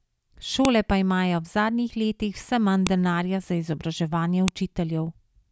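Three sharp, loud clicks at 0.65 s (before "pa imajo v zadnjih"), 2.87 s (before "denarja za izobraževanje") and 4.48 s (after "manj denarja za izobraževanje") mark a file header played as audio: joined WAV pieces kept their headers, so those bytes play as brief speech-independent snaps.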